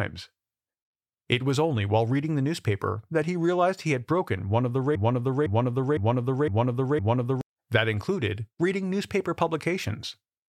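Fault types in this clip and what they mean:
Broken-record loop: Right after "broken one of the", at 4.95 s, a half-second fragment of about 0.51 s repeats exactly, back to back, five times until 7.41 s, and whatever should have played there is lost. The playback or stream likely stalled and kept resending its last buffered piece. Unlike an echo, which decays and overlaps new sound, or a stutter of tiny repeats, each repetition here is an identical, full-level copy.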